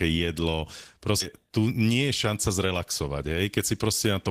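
At 1.20 s the speech lurches forward with no pause and nothing filling the join: roughly a third of a second of talk is simply gone, and the sounds on either side are butted straight together. This is a skip ahead. Later audio was already queued when that stretch was dropped, either in transit or by a jitter buffer discarding its backlog, so playback jumped to the newer material and the delay fell by about the same amount.

From 1.43 s to 2.74 s the talking sounds slightly rushed, running at about 108% of normal speed while the pitch stays where it was. This is a jitter buffer speed-up. The receiver was holding more audio than its target, so it cut out many small slices, each one or a few pitch periods long, one after another. Together they removed roughly a tenth of a second, bringing the delay back down without shifting the pitch.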